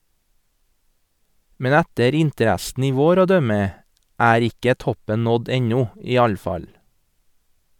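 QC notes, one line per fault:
No technical faults were found anywhere in the speech signal, so the audio chain appears intact.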